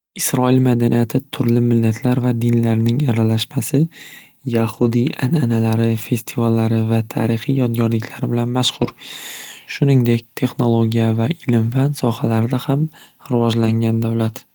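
Speech clip with ten lost packets rebuilt from error correction, in three bursts at 4.73–4.87 s, 8.81–8.91 s and 13.61–13.71 s. There's no dropout, but each stretch turns briefly rough and noisy, consistent with the decoder playing low-bitrate backup copies carried in the following packets.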